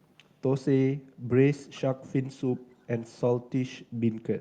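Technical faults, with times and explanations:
1.74–1.81 s and 2.79–2.83 s, echo leak: brief scraps of the speech return about 445 ms late, the first faint and the second barely audible, likely from a far-end loudspeaker whose echo canceller let part of its microphone pickup through and sent it back.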